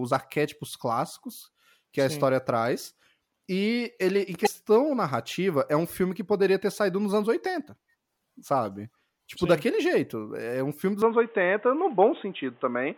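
At 4.43 to 4.48 s, right after "ele em" and just before "narrativa é um filme", there's a brief glitch. That's damaged data in a compressed stream: the decoder hit corrupted frames, lost sync and had to hunt for the next good frame header.

From 11.02 s to the end, right after "um filme dos", the speech suddenly goes dull and boxy, with nothing above 3.8 kHz. The level shifts by a few dB and a new faint noise floor appears well under the speech. There's no gap at the change. This is likely the input switching to a poorer device, a narrower-band mic or headset path.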